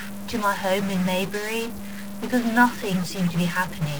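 From start to end, the speech carries a harsh, buzzy distortion. It sounds like a stuck bit. One data bit is likely held at a fixed value, perhaps by a broken line or converter. Samples that should differ at that bit are pushed off by a step of about -30 dBFS. The error follows the waveform, so it rasps along with each sound. In the pauses, small values keep flipping sign. That fills the gaps with steady noise.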